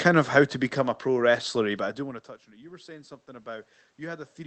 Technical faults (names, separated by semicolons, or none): automatic gain rising